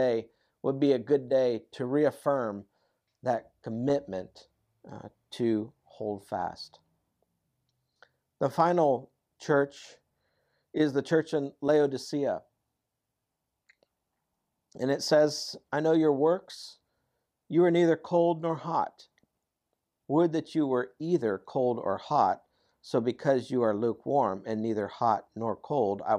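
Nothing in this speech recording stands out as a technical fault, so there's really nothing here to flag.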